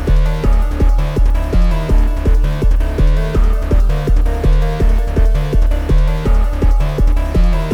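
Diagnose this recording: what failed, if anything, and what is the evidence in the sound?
Nothing failed; no stage shows any audible fault.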